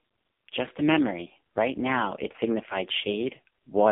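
Throughout the speech, the sound carries AMR narrowband mobile codec damage: only about 200 Hz to 3.5 kHz survives, with nothing above 3.6 kHz. Unlike a plain telephone filter, the heavy buzzy, synthetic coloration points to a very low AMR-NB mode around 5 kbps.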